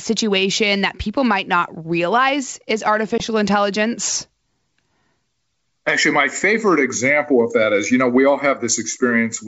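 Packet loss on an ADPCM call at 3.18–3.22 s: a 20 ms hard-edged silence, likely one lost packet, after which the desynchronised decoder brings the speech back with brief distortion.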